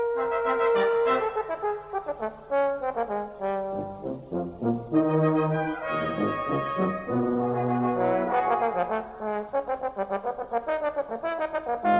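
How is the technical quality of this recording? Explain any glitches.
No glitches to report: the audio carries the telephone-band ceiling of a call path, with nothing above 4 kHz, which fits a G.711 A-law link at 64 kbps, and nothing interrupts it.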